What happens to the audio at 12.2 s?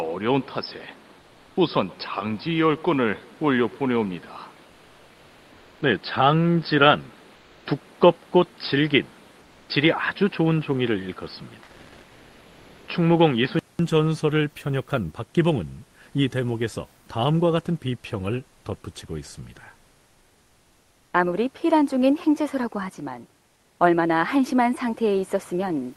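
Comfort noise in place of the background covers 11.63 to 12.87 s, about 1.24 s. The sender likely stopped transmitting during the pause, in the manner of Opus DTX, and the receiver filled the gap with synthetic noise. The real background, about 31 dB below the loud parts, becomes a flat, featureless hiss at the same level.

Underneath that, the input likely switched to a poorer device, from 0.0 to 13.79 s. Nothing reaches above 5.2 kHz, so the sound is dull and boxy, with its own noise roughly 30 dB down. It ends with a 200 ms silence and a jump of roughly 5 dB in level.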